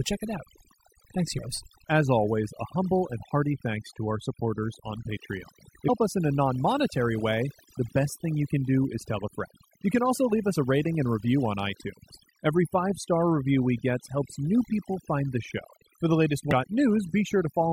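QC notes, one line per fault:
Throughout: overdone noise removal. The noise reduction was pushed too hard, so individual frequency bands near the noise estimate are cut to almost nothing, and the quieter parts of the speech are removed with them. The background falls to near silence flecked with twinkling specks. On a spectrogram, the gaps between phrases look nearly black with scattered isolated dots, and the harmonics look patchy with holes punched through them.
1.37 s, 5.88 s, 16.51 s: damaged data in a compressed stream. Three brief blips of 20 ms or less each, the one at 5.88 s falling just before "us in a non". At each, corrupted bytes in the compressed data made the decoder misread a frame and lose sync until it found the next valid frame header. The result is a short chirp, squawk, click or hole. A spectrogram shows a narrow vertical smear of broadband or oddly pitched energy, and the waveform shows a tiny burst or discontinuity.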